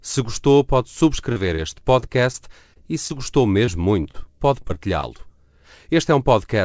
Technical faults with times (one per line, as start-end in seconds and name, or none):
1.32-5.20 scattered short gaps